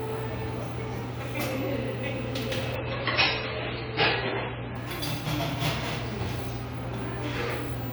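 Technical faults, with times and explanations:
2.76 to 4.76 s, adaptive stream at a lower bitrate: for two seconds the sound abruptly loses its top end, with nothing above 5.6 kHz, and the remaining detail takes on swirly codec artefacts. Quality then snaps back without any gap. This fits a streaming player briefly switching from a rendition of around 128 kbit/s to a much leaner MP3 stream near 15 kbit/s when throughput dropped, forcing the encoder to discard high frequencies.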